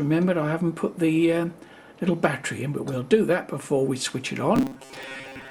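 From 4.56 to 5.50 s the sound turns into robotic sound from repeated short buffers. A rigid, metallic buzz sits on top of it at 134 Hz. The audio still traces its rough shape, but the natural movement is gone. The likely cause is new audio arriving too seldom, so a snippet of about 7.5 ms is replayed to fill the gaps. Much of the stretch is repeated material, and the skipped audio is lost.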